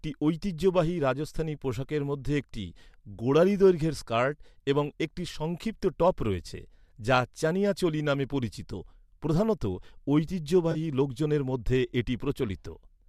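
Between 10.72 and 10.77 s, just before "লোকজনের মধ্যে", the speech briefly turns smeared and noisy, a phasey patch rather than a clean dropout. This is AAC frame loss with concealment. A short burst of coded frames went missing, which fits about three lost frames, and the decoder covered the gap by reusing the last good spectrum with its energy held and its fine detail scrambled. The loss was short enough that the concealment never faded toward silence. The slightly grainy texture around it likely comes from light low-delay AAC compression.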